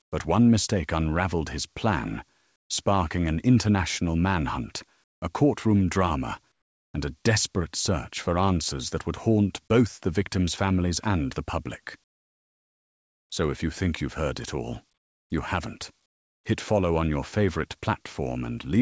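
Discontinuous transmission, likely, left comfort noise in place of the background at 0.02–0.12, 2.56–2.70, 5.04–5.22, 6.52–6.94, 12.04–13.30, 14.98–15.30 and 16.06–16.44 s. In each pause the real room sound drops out and is replaced by flat, featureless synthetic hiss about 15 to 26 dB quieter. The call path's band limit, with nothing above 8 kHz, fits a wideband codec such as G.722.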